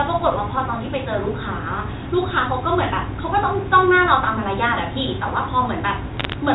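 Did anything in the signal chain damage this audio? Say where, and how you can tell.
Yes. From 6.17 to 6.33 s, sharp ticks and crackle sit over otherwise intact speech near the end. That points to bit errors on a digital phone line: a small fraction of flipped bits in the G.711 stream each corrupt one sample, and sign or high-bit hits become clicks.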